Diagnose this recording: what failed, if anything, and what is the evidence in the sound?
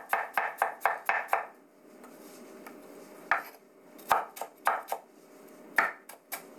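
Nothing failed here: the signal stays continuous and stable throughout, with no audible disturbance at any stage of the chain from capture to playback.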